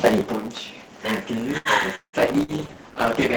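Throughout the speech, a block size mismatch (truncated) is at work. One stage hands over longer blocks than the next stage takes in, and the tail of every block is discarded. Because a slice goes missing at a fixed rate, a buzz at 109 Hz sits under the whole clip, and the speech runs about 1.09 times too fast while keeping close to its normal pitch. The missing pieces are short and regular, so the result sounds hurried rather than gappy.

From 1.57 to 1.68 s there is a short stall from a late packet. A packet was overdue and the jitter buffer ran dry, so the receiver stretched the last sound for about 78 ms until the packet turned up, then carried on from exactly where it had stopped. Nothing is lost, but the sound at that point is held too long, with a slight buzzy quality, and everything after it arrives about 78 ms later than before.

Between 1.95 and 2.16 s the sound is first carried on artificially for about 178 ms, fading as it goes, then drops to roughly 80 ms of silence before the speech resumes further on. 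About 180 ms of material never returns. This is likely a long network dropout, where nothing reached the receiver for a stretch and it could only extend the last sound before giving up.

At 2.30 s a call bitrate drop begins and lasts to the end of the clip. The link's bandwidth estimate fell, and the encoder was told to cut from 32 to 13 kbps, staying at that low rate for the remaining second or so. With far fewer bits, the coding becomes coarser and the high frequencies are trimmed, so the speech turns muffled and rough for the rest of the clip.

Inside that low-bitrate stretch, from 2.43 to 2.51 s, a burst of packet loss occurs. Several consecutive packets failed to arrive in time, so the receiver filled about 52 ms by continuing the last sound and turning it down as it went, giving a brief held buzz or fading hiss. The speech then picks up further along, with about 60 ms of it skipped.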